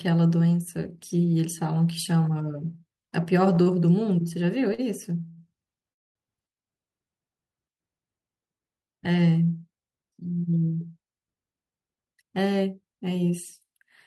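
At 3.63, 4.74 and 5.28 s come three short stalls from a late packet. The jitter buffer ran dry, so the last sound is held for 34, 44 and 84 ms before resuming, heard as a brief buzzy hold. On a spectrogram each shows as smeared horizontal streaks.

A call audio freeze follows from 5.93 to 6.17 s, likely from packets held up in transit. The sound buzzes briefly, then falls to about 220 ms of silence, a flat gap in the waveform, before continuing.

From 11.33 to 12.68 s a jitter buffer speed-up removes short pitch-period slices, about a fifth of a second in total, so the sound runs 14% fast at unchanged pitch. The spectrogram appears horizontally compressed, and throughout, the Opus call path's content stops near 12 kHz.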